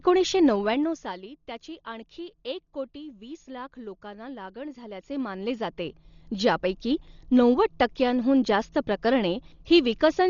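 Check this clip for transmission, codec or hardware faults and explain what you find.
Two faults are audible in the speech, one throughout and one brief.

Throughout, the sound is dull with rough, fluttering noise around tones and nothing above 6.9 kHz, likely Dolby Digital compression at a low bitrate, perhaps near 40 kbps, with dither-filled lines.

From 0.46 to 1.21 s, just before "त्याची आणखी एक कोटी", zipper noise: the level drops roughly 15 dB in 2 dB steps, about ten per second, each step ticking audibly.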